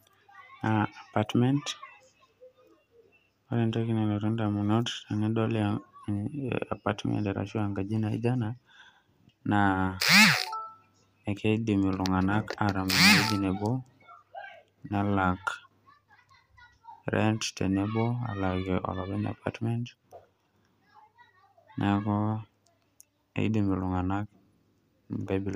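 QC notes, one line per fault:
Nothing to flag on this speech clip; no faults turned up anywhere in it.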